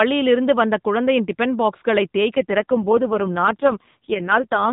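From 2.36 s to 4.72 s, just after "வந்த குழந்தையின் டிபன் பாக்ஸ்களை", an AMR rate drop occurs: the mobile link pushes the AMR narrowband codec onto its lowest speech rate, which fits a fall from 12.2 kbps to 4.75 kbps, giving more of each frame to error protection. With so few pulses left to excite the vocal-tract model, the speech turns buzzy and synthetic through to the end, while the band stays at the same 4 kHz ceiling and nothing drops out.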